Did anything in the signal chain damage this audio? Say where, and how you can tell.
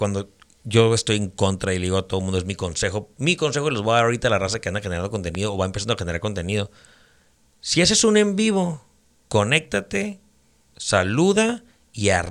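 Yes. One loud pop, roughly 10 dB above the speech, sits at 5.35 to 5.37 s, between "raza que anda generando" and "o va empezando a". The speech continues underneath, ruling out a dropout. It is an added voltage pulse, likely from a switch or static in the analogue wiring.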